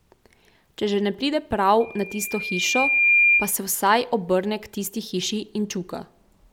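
From 1.80 s to 3.55 s the speech is overtaken by a loudspeaker feedback squeal: a microphone was picking up the loudspeaker it fed, and at 2.4 kHz the loop gain rose above one, so that frequency fed on itself. It swells over roughly a second and a half to about 10 dB above the speech. The gradual build of one pure pitch sets it apart from a steady interference whine, which starts at full strength and holds.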